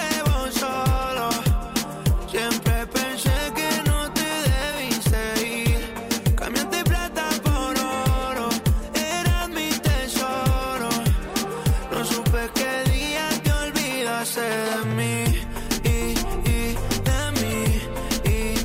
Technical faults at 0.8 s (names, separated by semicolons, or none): none